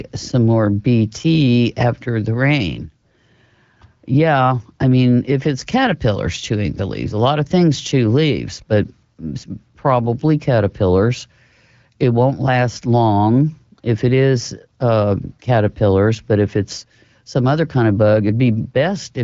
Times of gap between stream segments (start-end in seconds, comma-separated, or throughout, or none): none